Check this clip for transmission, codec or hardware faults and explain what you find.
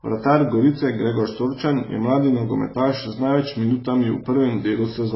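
There's one fault, and it runs through the whole clip: heavy AAC compression damage. The speech goes dull above about 5.6 kHz and smears, with a warbly, fizzy edge on sibilants. That's likely AAC-LC starved of bits, which fits around 16 kbps, so it drops the top band and coarsely quantises the rest.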